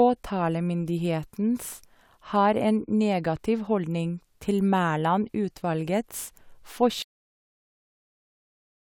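Speech recording with a cut-off end: at 7.02 s the sound stops mid-utterance and drops straight to digital silence, with no decay tail, unlike a fade-out or natural pause.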